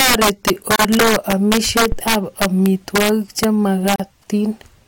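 Right through the speech there's integer overflow: the gain runs about 9 dB too hot, and instead of being held at the limit, the loudest peaks, a few percent of the samples, wrap around to the opposite sign. You get vicious cracks on loud syllables, far harsher than ordinary clipping.

Then there are two gaps at joins of encoded pieces, from 0.76 to 0.79 s (about 33 ms) and from 3.96 to 4.00 s (about 38 ms). Separately encoded segments were butted together with their start-up delay and end padding left in, so the speech drops out abruptly, smeared at the edges, then resumes right where it stopped.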